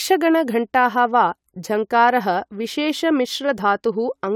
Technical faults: none

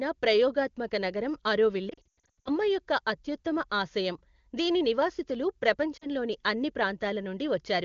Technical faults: lost AMR speech frames

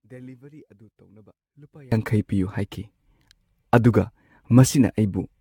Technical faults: generation loss; one channel inverted

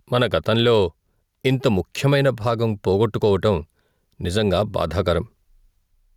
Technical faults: gain pumping

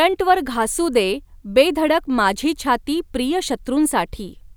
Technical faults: none

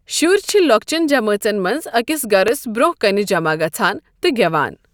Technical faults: loud pop

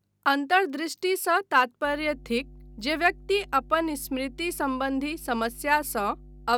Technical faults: mains hum

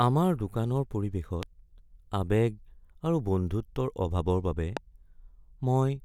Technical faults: loud pop

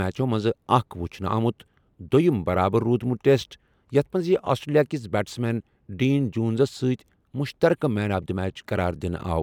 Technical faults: dropped samples

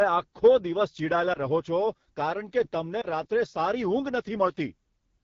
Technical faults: AMR wideband (HD Voice) codec; lost AMR speech frames

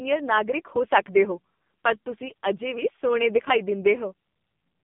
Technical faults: AMR narrowband mobile codec

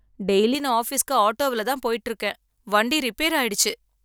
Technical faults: pre-emphasis left on

